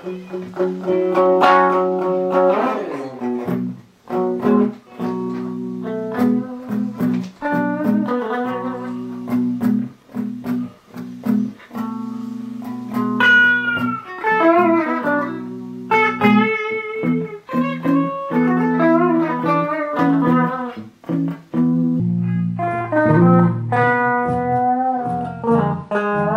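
A section at the wrong speed runs from 22.00 s to the end, likely from playback or editing on a mismatched clock that slowed it to 0.703 times its original rate. Pitch and pace drop together, so the sound turns deep and sluggish, about seven semitones lower.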